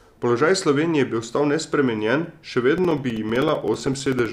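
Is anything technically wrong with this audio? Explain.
Yes. From 2.78 s to 4.26 s the speech is broken by a run of around twenty evenly spaced ticks, one every 64 ms, heard only while the voice is sounding. These are periodic USB or driver dropouts: something blocks the audio driver or USB bus at a fixed interval, so a few milliseconds of signal are lost each time and replaced with silence. The abrupt gaps cut into the waveform and produce the regular clicking.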